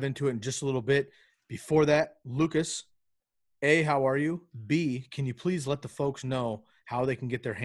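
No technical faults are audible.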